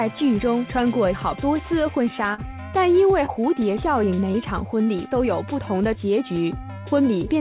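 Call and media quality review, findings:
Brief smear or wobble at 2.34–2.40 s, then shorter ones at 3.26–3.30 s and 4.32–4.36 s. Short concealed packet loss at the receiver: roughly 40 ms, then 20 ms twice, arrived too late for the decoder. The gap was filled by extending the preceding sound, then crossfaded back into real audio. Fill audible against the narrowband G.711 A-law call path, which has nothing above 4 kHz.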